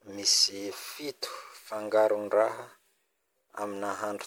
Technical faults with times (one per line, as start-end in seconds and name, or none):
0.00-4.27 generation loss